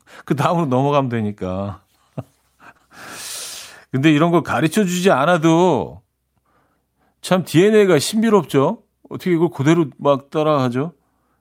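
At 2.77 to 2.81 s there is a short concealed packet loss. About 20 ms of the speech arrived too late for the decoder. The receiver patched roughly 17 ms by extending the preceding sound, then blended back. It is heard as a brief smear.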